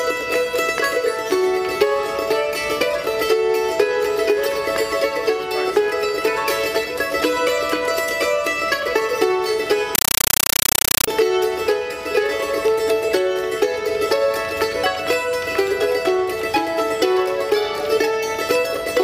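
From 9.95 to 11.08 s the sound is replaced by harsh, very loud chattering static, a rapid stutter of 8 ms noise bursts separated by silence and repeating 31.25 times a second. This is a compressed stream played as audio: encoded AC-3 data arriving over a digital link was passed through as if it were ordinary samples instead of being decoded. Each data frame comes out as a noise burst plus zero padding, a pattern that fits a 384 kbps stream.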